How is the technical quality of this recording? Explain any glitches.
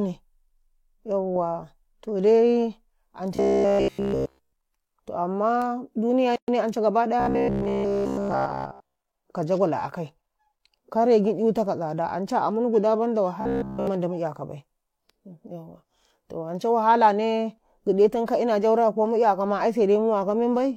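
Three stretches of robotic sound and one short dropout affect the recording.

Robotic sound from repeated short buffers occurs from 3.36 to 4.54 s, 7.20 to 8.95 s and 13.41 to 13.87 s. In each stretch the speech turns into a rigid, metallic buzz at about 66.7 Hz that only loosely tracks the words. That buzz frequency points to a 15 ms chunk being replayed over and over, with essentially all of the sound in these spans made of repeats. The likely cause is audio arriving too slowly, so playback loops the last buffer while real material is skipped.

A gap at a join of encoded pieces appears from 6.36 to 6.48 s. The speech breaks off in a gap of about 122 ms with smeared edges, so the truly silent part is shorter, then resumes where it left off. This happens when separately encoded segments are joined without trimming, leaving each encoder's start-up delay and end-frame padding in the stream.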